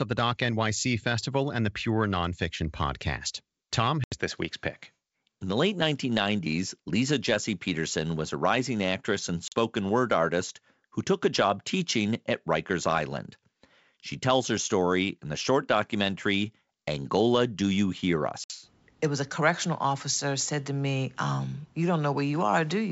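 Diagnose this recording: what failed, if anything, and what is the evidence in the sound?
Packet loss on an ADPCM call at 4.04, 9.48 and 18.44 s: network drops cut silent holes of 80, 40 and 60 ms, then the decoder's predictor and step size briefly mistrack.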